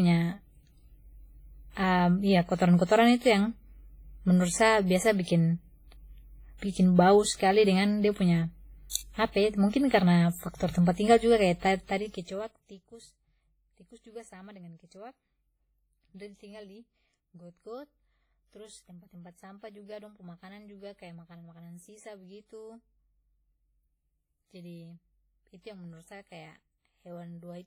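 Heavy WMA compression, likely a low-bitrate transform encode around 24 kbps, zeroes weak spectral detail throughout the speech, leaving a ringing, washy sound with hiss that breathes along with it. At 8.90 to 8.95 s the codec smears block noise ahead of an attack, so pre-echo puts about 57 ms of hiss before it and softens the onset. From 11.70 to 12.98 s a level fade of some 25 dB is applied in unsmoothed 2 dB steps, about fifteen a second, and that zipper noise rides on the sound as ticking.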